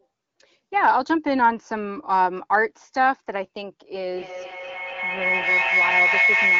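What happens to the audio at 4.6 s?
At 4.6 s a feedback howl is under way. It starts at 4.02 s and runs to the end at 6.6 s. Sound re-enters the microphone from a loudspeaker and grows each trip. It narrows to a tone near 2 kHz, with repeats about every 200 ms, peaking about 2 dB above the speech.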